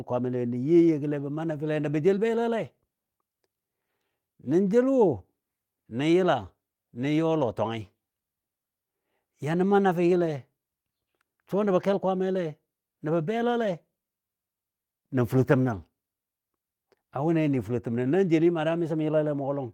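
No technical faults are audible.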